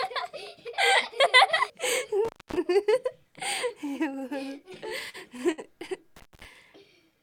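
At 2.25–2.58 s and again at 6.16–6.45 s, an intermittent contact opens the line for about 250 ms and then 200 ms. Crackle marks each edge, and faint hiss remains between, unlike a clean digital dropout. From 4.89 to 5.60 s, repeated stalls cause a stutter: six short holds, the longest 63 ms, extend the last sound while the jitter buffer refills. Together they add 144 ms, so the sound drags but nothing goes missing.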